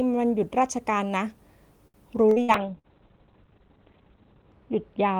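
Choppy, metallic stretches break up this speech recording between 1.87 and 2.87 s, where sound keeps catching and smearing as if spoken through a machine. That is repeated packet loss (robotic sound): four separate holes opened in the stream, the longest about 66 ms, and each was papered over by stretching out the sound just before it, so roughly a quarter of that second is concealment rather than real audio. Three sharp, isolated clicks sit at 2.31, 3.44 and 4.52 s. Each is a tiny discontinuity, with a fraction of a millisecond missing so the waveform jumps abruptly, and the likely cause is dropped samples somewhere in the capture or playback chain. From 2.56 s to the end the sound turns dull and rough, with a watery, smeared texture and the top end gone. That is a call bitrate drop: the Opus encoder, carrying the call at 32 kbps, was pushed down to 7 kbps after the connection's bandwidth estimate fell. 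At that rate it codes far more coarsely and narrows the audio band from about 20 kHz to about 4 kHz. It stays at the lowest rate for about 2 s and has not recovered by the end.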